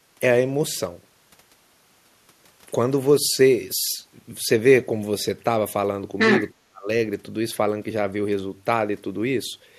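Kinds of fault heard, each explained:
Other side's voice leaking through: From 6.18 to 6.48 s a second voice comes through, about as loud as the talker. The likely cause is the far end playing on a loudspeaker, with the echo canceller failing to remove it from the microphone.
Speech suppressed in double talk: From 6.53 to 6.89 s the talker's speech plunges very deeply, almost to silence, for under half a second. This likely comes from both sides overlapping, so the echo canceller turned everything down rather than separating the talker from the echo.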